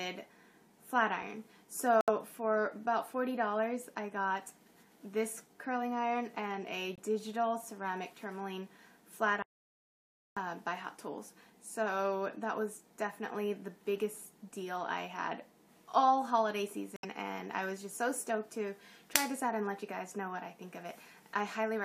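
The audio cuts abruptly to silence three times: 2.01 to 2.10 s (90 ms), 6.96 to 7.00 s (40 ms) and 16.96 to 17.05 s (about 87 ms), with the timing around each gap unchanged. These are corrupt frames muted. Damaged compressed frames were rejected by the decoder and replaced with silence, and the gap lengths point to about four, one and three frames respectively. From 9.42 to 10.37 s, a span of about 0.94 s, the sound drops out mid-flow into silence with no room tone, and whatever was playing in that interval is missing. This is an audio dropout to silence, likely caused by the input signal being lost, through a disconnection, a link failure or an accidental mute, while recording continued to write silence.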